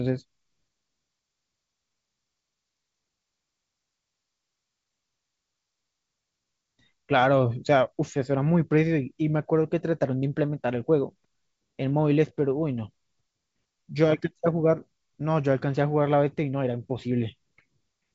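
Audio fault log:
Nothing here needs flagging: the speech comes through G.722 wideband telephone coding at what sounds like 64 kbit/s, with the top end stopping at about 7.7 kHz as that coding intends.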